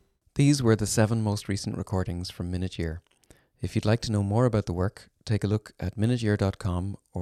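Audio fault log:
0.28 to 6.60 s, clock drift buffer slips: a click lands every 1.05 s across the speech, about seven in all, evenly spaced regardless of what's being said. That steady rhythm is the giveaway. It's likely two devices running on separate clocks a few hundred ppm apart, so the buffer between them creeps until a short block of roughly fifteen samples gets dropped or repeated, and each jump in the waveform comes through as a tick.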